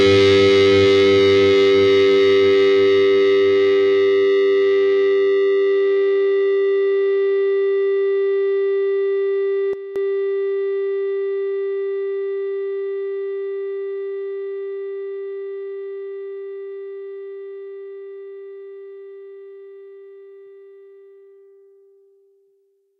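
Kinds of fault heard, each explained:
Sudden gain jump: at 9.73 s the level drops by about 11 dB in a single step, holds there for 0.22 s, and snaps back at 9.96 s. The background noise falls and recovers by the same amount, which is likely a digital gain setting applied without any ramp. Unlike a fade or compressor pumping, there is no gradual slope and no dependence on how loud the sound is. The whole signal simply shifts level together.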